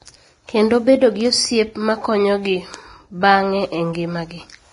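Vorbis compression damage runs throughout the speech, with nothing above 10.6 kHz and a hissy, grainy treble. The likely cause is heavy lossy coding at a rate that fits about 30 kbps, where the codec quantises upper detail so coarsely that it turns into noise.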